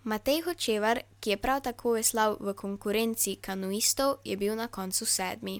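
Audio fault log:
No audible faults detected.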